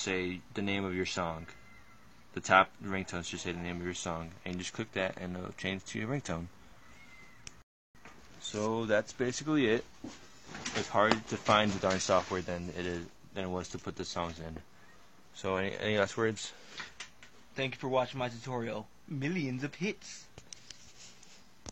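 A rebuffering stall interrupts the audio at 7.62 s, dropping to silence for 0.33 s before resuming exactly where it stopped; waveform and spectrogram show a clean blank gap, nothing missing.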